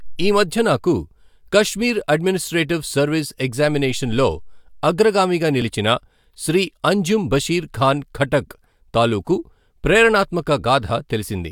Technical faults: none

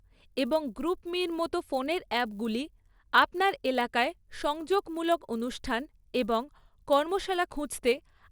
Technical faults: resampler restarted on every block

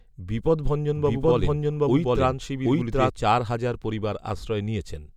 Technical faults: doubled audio track

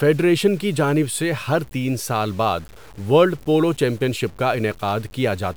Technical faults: low bit depth without dither

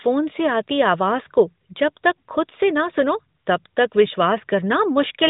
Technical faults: none

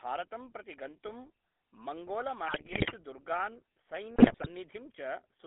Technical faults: GSM full-rate codec; GSM bit errors

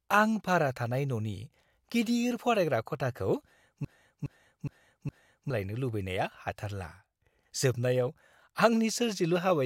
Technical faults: broken-record loop

